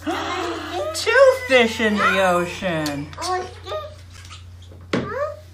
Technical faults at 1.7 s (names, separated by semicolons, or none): none